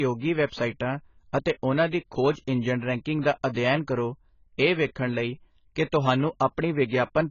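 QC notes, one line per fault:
Throughout, AAC compression: the top end stops dead at about 7 kHz, so everything sounds dull, and the sibilants turn fizzy and watery, with a warble on held sounds. That's likely a low-bitrate AAC-LC encode, around 16 kbps by the sound of it, with the encoder dropping its cut-off and starving bands of bits, so holes open up in the spectrum and the detail gets smeared.
3.22 to 3.25 s, pre-echo: right after "ਖੋਜ ਇੰਜਣ ਰੈਂਕਿੰਗ" there's a brief hiss, about 31 ms long, running just ahead of a sharp onset, and the attack itself comes out softened rather than crisp. The codec spreads its quantisation noise across the whole block, so noise sized for the loud attack also lands in the quiet stretch before it. That's why the hiss arrives early.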